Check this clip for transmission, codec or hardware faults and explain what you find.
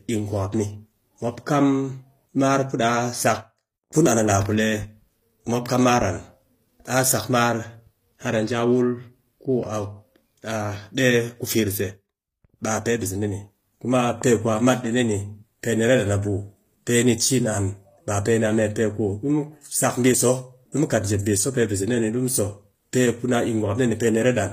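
One codec fault runs through the entire clip. The s sounds come out plainly gritty and lispy, and the treble is synthetic, with nothing above 15.5 kHz. This is likely HE-AAC compression at around 24 kbps. The treble is rebuilt from copied lower bands rather than coded, so its harmonics don't line up with the real ones.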